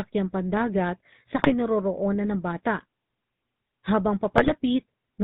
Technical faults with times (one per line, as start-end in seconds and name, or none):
0.00-5.24 GSM full-rate codec
1.36-1.52 GSM bit errors
4.36-4.52 GSM bit errors